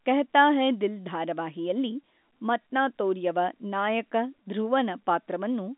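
Nothing is technically wrong with this speech clip, which has the narrow, band-limited sound of an ordinary G.711 telephone line.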